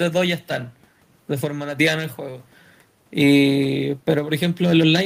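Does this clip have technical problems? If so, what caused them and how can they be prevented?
No, nothing in this speech recording points to a technical fault, so there is no cause to trace and nothing to prevent.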